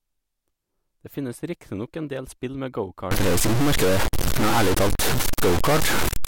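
Speech, turning harsh and buzzy from 3.11 s to the end, likely a stuck bit worth about -15 dBFS; unlike clipping, the grit persists through pauses as steady noise.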